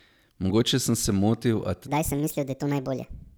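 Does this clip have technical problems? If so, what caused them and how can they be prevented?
Yes. Right after "sem se motil a", at 1.87 s, the speech jumps into a section at the wrong speed and stays there through 3.38 s. It's running 1.47 times too fast, so the voice turns hurried and chipmunky, jumping up by roughly seven semitones, because speed and pitch are locked together when playback rate changes. The likely cause is that stretch being played or rendered against the wrong clock, like a sample-rate mismatch in an edit. To prevent it, keep every segment and the session on one sample rate and properly resample anything that doesn't match before it goes on the timeline.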